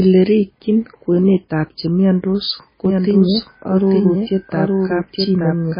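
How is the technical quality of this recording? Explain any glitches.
Technically it's in poor shape: the speech is heavily damaged by low-bitrate coding throughout, and the second half has a delayed copy of itself running underneath.

MP3 compression runs the whole way through. Nothing remains above 5 kHz, so the speech sounds dull, and the codec damage is heavy: watery, swirly texture, smeared consonant attacks, metallic chirps on sibilants. This is likely MP3 starved of bits, fitting something around 16 kbps, where the encoder drops weak frequency components that then flicker in and out from frame to frame and chops off the top end.

A doubled audio track kicks in at 2.85 s, right after "kwenetab chemiondos", and carries on to the end. A second full-band copy of the speech trails roughly a second behind, about 5 dB down, with no reverb tail or room colour. It switches on abruptly, so you suddenly hear the speech talking over itself. 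The likely cause is the same signal getting captured twice, through a slower second path or an edit leaving two out-of-step copies.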